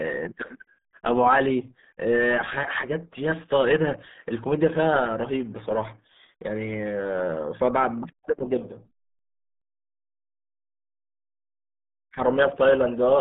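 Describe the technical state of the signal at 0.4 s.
At 0.4 s the speech carries the RealAudio 14.4 codec damage that runs through the entire clip. The sound has been squeezed through a very low-rate speech coder, consistent with an 8 kbit/s dial-up stream, which keeps only roughly 150 Hz to 3.7 kHz and discards everything above about 3.8 kHz. The coding damage is heavy, leaving the speech muffled and gargly. A spectrogram shows a flat ceiling near 3.8 kHz with empty space above and smeared, blotchy harmonics below.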